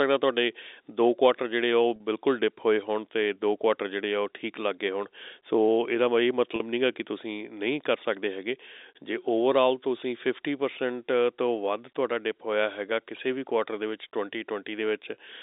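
At 1.96 s and again at 6.56 s the speech briefly holds on a slightly buzzy, frozen tone for about 40 ms. This is packet loss with pitch repetition: a short run of packets dropped out, and the receiver bridged each gap by repeating the last pitch period.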